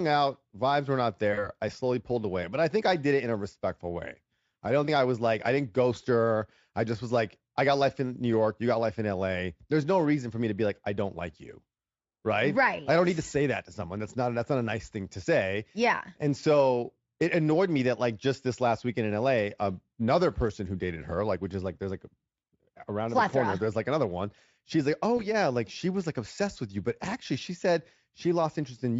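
At 1.33 to 1.49 s, between "were not" and "I slowly pulled away", there's VoIP packet loss concealed by the speech codec. About 40 ms of audio went missing, which points to two lost frames. The decoder kept guessing from the last pitch and filter while fading the level, so you get a brief stretched, buzzy or noisy sound that takes a moment to recover. The same thing happens at 25.17 to 25.28 s, between "like oh" and "like she was like", with only 20 ms lost, so it's a shorter blip. The Speex coding around both events shows little or no damage.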